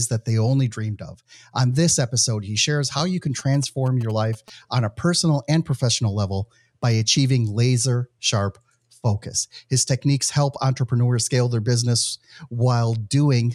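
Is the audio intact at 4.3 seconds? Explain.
No. At 4.3 seconds the speech sits under GSM signalling bursts, which run from 3.39 to 4.50 s, between "shares how you can" and "on a personal and". A nearby 2G phone's radio bursts are rectified by the audio circuit, giving a galloping dit-dit-dit of short 217 Hz buzzes about 20 dB below the speech. On a spectrogram they show as clusters of vertical stripes with a 217 Hz harmonic comb, and on the waveform as regular spiky pulse trains.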